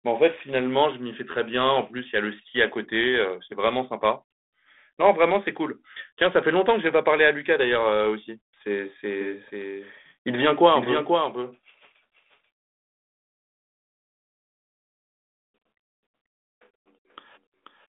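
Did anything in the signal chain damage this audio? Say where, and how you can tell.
Yes. From 9.21 s to the end, the audio carries a doubled audio track. The likely cause is the signal being picked up a second time through a slower capture path, or an edit leaving two copies out of alignment. A second full-band copy, about 5 dB quieter and roughly half a second behind, starts abruptly and runs under the original with no decay or room colour, so the speech sounds stuttered against itself rather than reverberant.

Between 11.64 s and 12.48 s there is a codec payload misread at the decoder. The two ends disagree on the bit order of the G.726 code words, so each code word is unpacked with its bits reversed and turned into the wrong difference values. The result is harsh, grinding distortion that buries the speech for that stretch. It clears at 12.48 s, where both sides are reading the same packing again, leaving the light coding texture of the 32 kbit/s G.726 link, which is band-limited to about 250 Hz to 3.6 kHz.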